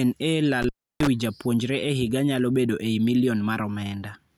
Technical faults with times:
0.62-1.07 intermittent contact

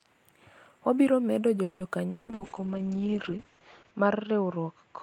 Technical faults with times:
1.63-1.83 call audio freeze
2.10-2.31 long network dropout
2.27-5.03 call bitrate drop
2.34-2.43 burst of packet loss

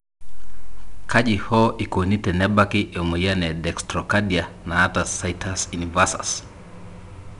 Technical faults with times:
0.00-7.40 4-bit ADPCM compression

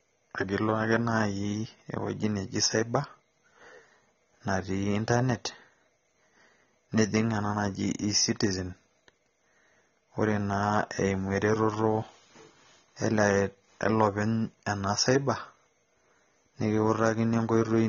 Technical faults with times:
0.00-17.89 AAC compression

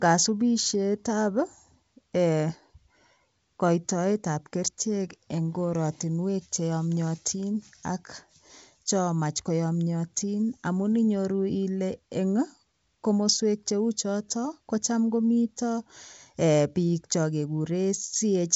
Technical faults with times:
none

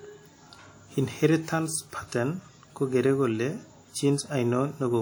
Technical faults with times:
0.00-5.02 WMA compression

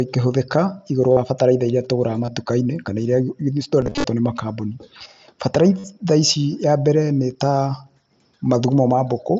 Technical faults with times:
1.12-1.17 concealed Bluetooth headset packet loss
2.25-2.28 concealed Bluetooth headset packet loss
3.81-4.04 concealed Bluetooth headset packet loss
5.55-5.57 loud pop
5.79-5.84 concealed Bluetooth headset packet loss

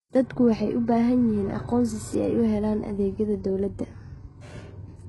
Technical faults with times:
0.00-5.08 HE-AAC compression

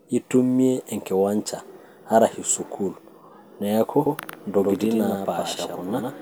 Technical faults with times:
4.06-6.21 doubled audio track

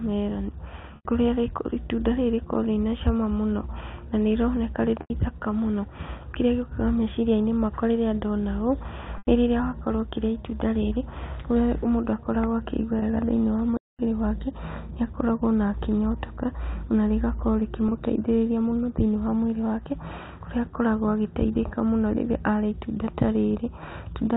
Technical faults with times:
0.96-1.05 packet loss with pitch repetition
5.01-5.10 packet loss with pitch repetition
9.18-9.27 packet loss with pitch repetition
12.99-13.02 packet loss with pitch repetition
13.77-13.99 playback stall
17.88-17.92 packet loss with pitch repetition

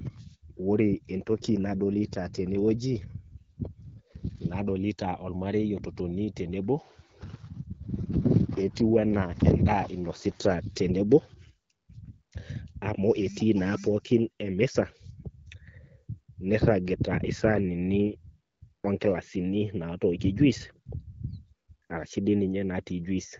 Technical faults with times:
1.14-4.40 AMR rate drop
7.94-10.68 AMR rate drop

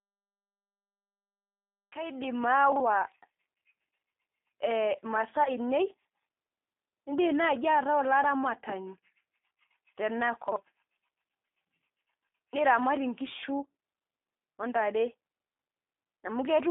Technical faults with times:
0.00-16.71 G.729 codec
5.44-5.53 VoIP packet loss concealed by the speech codec

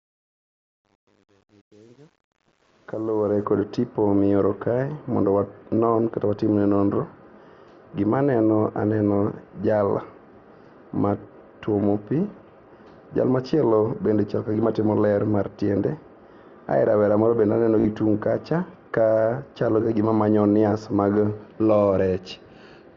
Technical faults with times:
0.00-3.44 truncation distortion on a fade
14.53 concealed Bluetooth headset packet loss
17.80-17.85 concealed Bluetooth headset packet loss

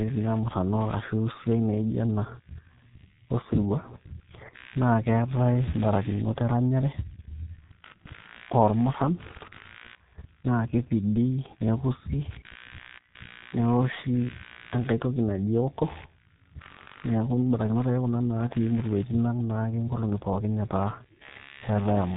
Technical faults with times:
0.00-22.17 computer activity noise
0.00-22.17 G.723.1 codec

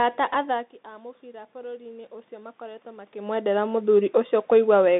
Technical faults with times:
0.00-5.00 Bluetooth CVSD headset codec
1.20-4.78 automatic gain rising

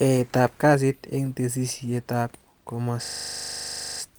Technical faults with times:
3.04-4.00 system hang loop

